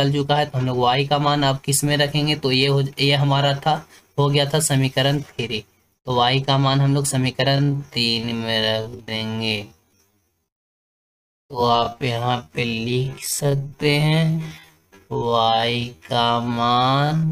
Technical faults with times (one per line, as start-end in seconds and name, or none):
7.46-17.31 time-stretched section